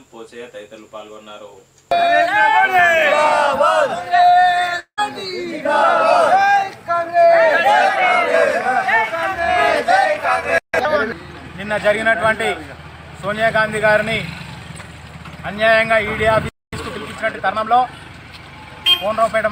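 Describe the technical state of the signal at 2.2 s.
At 2.2 s the signal is intact, with no dropout, distortion, glitch or other technical fault audible at that point.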